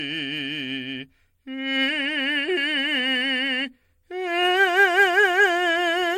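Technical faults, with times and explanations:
Throughout, generation loss: this music sounds swirly, smeared and hollow, with blurred attacks and nothing above 16.5 kHz. This is likely from around seven successive MP3 re-encodes, each re-quantising on a shifted frame grid, so the damage compounds beyond what a single 64 kbit/s encode would cause.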